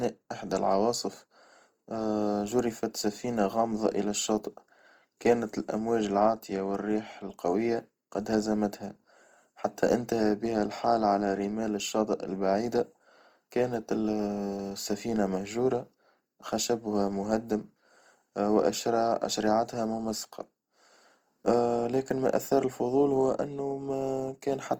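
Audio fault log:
Throughout, Opus compression: likely Opus encoding in music mode at a low rate, fitting about 24 kbps, leaves the speech plainly rough and grainy up to 20.1 kHz.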